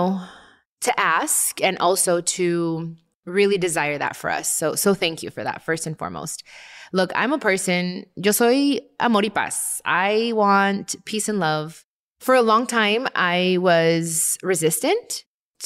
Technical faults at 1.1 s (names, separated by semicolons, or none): none